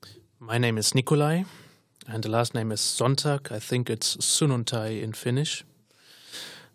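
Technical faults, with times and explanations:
Nothing stood out on listening to this speech recording.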